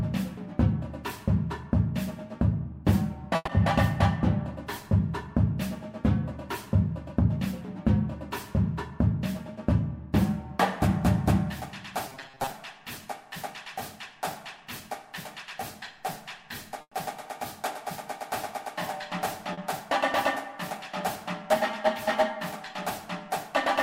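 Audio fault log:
3.35–3.49 s and 16.81–16.93 s, burst of packet loss: the last sound is stretched and faded over about 120 ms, then 100 ms, before a brief silence, and that stretch of audio never returns.
12.09–12.50 s, robotic sound from repeated short buffers: a rigid metallic buzz at 134 Hz, likely from a roughly 7.5 ms buffer replayed for about half the span.
19.53–19.59 s, short concealed packet loss: 40 ms of audio is missing and is bridged by extrapolating the previous sound, leaving a brief smear before the clip blends back.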